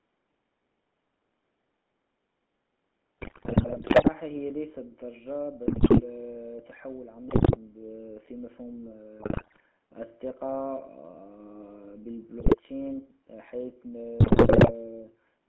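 Speech passed through the GSM full-rate codec, which fits a 13 kbit/s link, leaving a narrow line band of about 200 Hz to 3.4 kHz and a plainly buzzy, gravelly roughness throughout. GSM bit errors corrupted the decoder's filter, pitch and gain values at 3.18–4.09 s, 5.66–6.02 s, 7.28–7.57 s, 9.20–9.61 s, 12.40–12.55 s and 14.20–14.71 s, breaking the voice into squawks, pops and gargling bursts.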